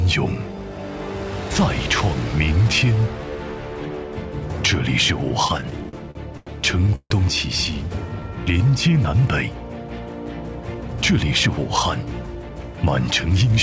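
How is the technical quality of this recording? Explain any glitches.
The recording has four timing glitches, all from the receiving side of a call link. Throughout, the audio stops at 8 kHz, which fits a wideband call codec such as G.722 at 64 kbps.

From 5.48 to 6.49 s there are repeated stalls (stutter): nine short gaps, the longest 94 ms. Packets kept arriving late, so the jitter buffer repeatedly ran dry and the receiver extended the last sound each time. About a quarter of that span is filled-in material, and the audio drags and stutters while nothing is lost.

From 6.95 to 7.12 s there is a call audio freeze of 149 ms. The sound is continued and fades, and its last 50 ms are silent. The likely cause is packets held up in transit that emptied the jitter buffer. Playback then resumes where it stopped, adding 149 ms of delay.

From 8.09 to 8.71 s there is a jitter buffer slow-down. 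To rebuild its reserve, the buffer repeated small pieces of the signal many times in a row, adding 103 ms. The audio plays at about 85% speed with unchanged pitch, so sounds are drawn out.

From 10.74 to 12.63 s there is a jitter buffer speed-up. With too much audio queued, the receiver trimmed short pieces repeatedly, removing about 150 ms. Playback runs at about 107% speed at the same pitch and sounds hurried.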